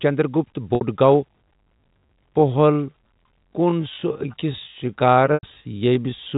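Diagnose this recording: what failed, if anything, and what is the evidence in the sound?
Packet loss with pitch repetition, network stage, at 0.75 to 0.81 s and again at 5.34 to 5.43 s. About 60 ms of speech goes missing in the first gap and 90 ms in the second, a pattern consistent with two and then three lost packets. The receiver bridges each hole by replaying the last pitch period and fading it over about 50 ms. The first gap comes across as a briefly held, buzzy tone. The longer second gap fades toward silence before the speech cross-fades back in. Both gaps sit on G.711 telephone audio, whose band stops at 4 kHz.

Time-stretched section, from 1.28 s to the end. The pace drops abruptly to about 0.65 times normal speed while the pitch stays where it was. The slowed speech drags because short fragments are repeated to lengthen it without shifting pitch. The likely cause is software stretching this stretch of audio to fill a required length, at a processing stage after capture.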